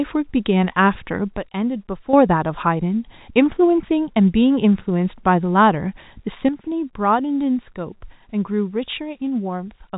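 Speech over a telephone-band line, with nothing above about 3.8 kHz. Voice and background drop together by about 9 dB from 1.37 to 2.13 s, then by about 8 dB from 6.49 s to the end. That's a sudden gain jump, likely a digital gain change applied without a ramp.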